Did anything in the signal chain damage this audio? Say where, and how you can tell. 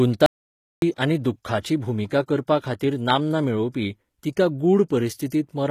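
Yes. At the codec stage, the whole speech clip carries plainly audible coding damage. Sibilants sound gritty and metallic, and nothing is present above 14.9 kHz. This is likely HE-AAC compression, with treble rebuilt by copying lower bands upward. It fits a low bitrate around 20 kbps.

There is an audio dropout to silence from 0.26 to 0.82 s, a gap of about 0.56 s. The sound cuts to silence with no room tone, then resumes. The likely cause is the input being lost at the device or link while the recorder kept writing silence.

Pre-echo occurs from 0.96 to 0.98 s. A hiss of about 23 ms precedes a sharp attack, which sounds smeared. This is codec-stage behaviour: quantisation noise sized for the loud onset is spread across the whole transform block, including the quiet moment before it.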